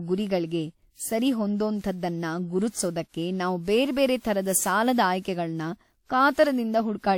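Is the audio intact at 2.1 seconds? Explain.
No. Generation loss runs throughout: the speech sounds swirly, hollow and smeared with blurred attacks, likely from about seven repeated re-encodes, consistent with a 96 kbit/s WMA chain.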